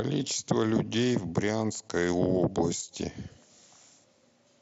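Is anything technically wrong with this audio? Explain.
No, nothing in this speech is technically wrong; it comes over the mSBC wideband Bluetooth headset codec as expected, with content up to about 8 kHz and the light graininess on louder passages that this link normally leaves.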